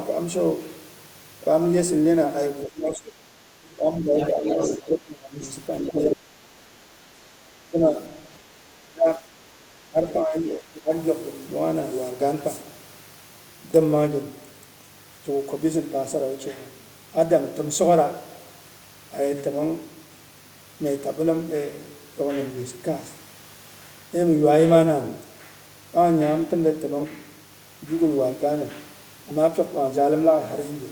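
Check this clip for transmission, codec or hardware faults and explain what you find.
Three faults are audible: a continuous mains buzz and, in the first eleven seconds, speech suppressed in double talk together with the other side's voice leaking through.

Mains buzz runs through the whole recording as a steady, raspy hum at about 30 dB below the speech. Its 50 Hz base and bright upper harmonics come from sharp switching spikes, twice per mains cycle, entering through a dimmer, rectifier or unshielded path.

Speech suppressed in double talk occurs at 2.67–3.17 s, 3.76–4.88 s, 5.83–6.63 s, 7.7–7.98 s and 8.64–10.91 s. The voice dips or breaks up, by roughly 10 to 25 dB at worst. This is likely an echo canceller attenuating everything when both parties spoke at once.

The other side's voice leaking through is heard from 4.18 to 6.15 s as a second voice only about 5 dB below the talker, and again as a faint scrap near 10.1 s. 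The likely cause is loudspeaker playback that the echo canceller failed to remove from the microphone.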